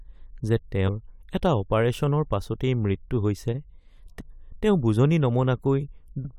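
Damaged data in a compressed stream shows up three times in this speech clip: at 0.87–0.89 s, 4.19–4.21 s and 6.21–6.25 s. Each time a short run of the encoded stream is corrupt, so the decoder misreads those frames, loses its place and hunts for the next valid frame header before it can resume. The result is a brief chirp, squawk, click or short hole of roughly 20 to 40 ms breaking through the speech.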